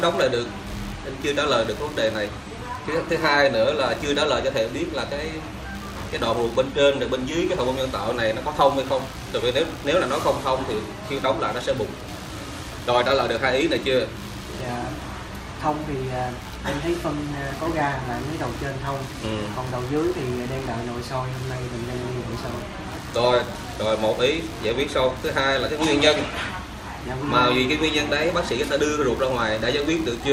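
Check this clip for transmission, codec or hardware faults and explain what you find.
One hardware fault runs through the whole clip: computer activity noise. From start to finish there is a chirping, buzzing layer under the sound, pulsing at around 70 times a second and sitting roughly 25 dB below the signal. It rises and falls with its own rhythm, not with the audio. The cause is the host computer: as the processor, graphics card or mouse change their load, the current they draw disturbs the ground shared with the audio circuit, and that ripple leaks into the recording.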